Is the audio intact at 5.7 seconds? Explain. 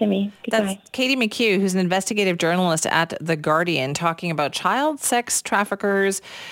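No. At 5.7 seconds, as throughout the clip, the speech carries a hiss-like roughness that swells on loud, bright sounds: sample clock jitter, with timing wobbling by a few microseconds and leaving error roughly 25 dB below the signal.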